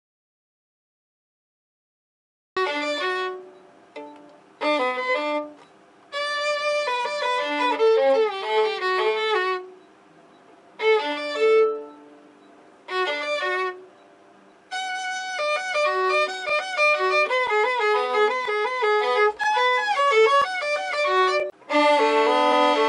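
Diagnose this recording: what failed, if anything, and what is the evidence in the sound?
Dead silence from the start to 2.57 s, no room tone at all: an audio dropout to silence, likely a lost input link while silence kept recording.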